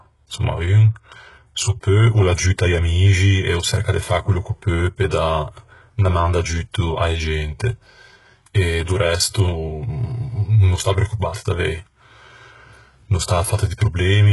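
From start to finish the speech carries heavy codec damage, most likely HE-AAC compression at a very low bitrate, consistent with roughly 12 kbps. The treble above the coded band is synthesised by copying lower bands upward, so s sounds come out gritty and lispy with a metallic sheen. On a spectrogram the upper region looks smeared and blocky, its harmonics misaligned with those below the crossover, and everything stops dead at 11.5 kHz.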